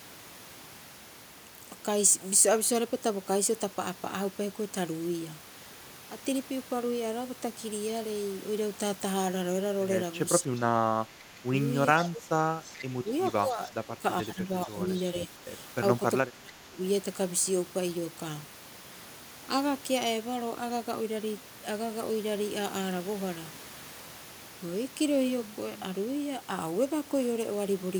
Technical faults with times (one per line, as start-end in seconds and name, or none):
10.42-10.51 speech suppressed in double talk
11.06-11.54 speech suppressed in double talk
11.98-13.10 speech suppressed in double talk
12.67-12.84 echo leak
13.28-13.33 echo leak
13.41-14.78 speech suppressed in double talk
15.27-15.31 speech suppressed in double talk
15.99-16.82 speech suppressed in double talk